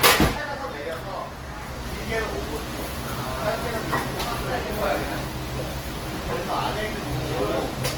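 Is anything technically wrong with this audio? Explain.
Yes. Throughout, there is Opus compression, likely in its music mode at a very low rate near 16 kbps. Starved bands are filled with folded or noise energy, so sounds turn grainy and rough rather than swirling like MP3, with bandwidth still reaching 20.1 kHz.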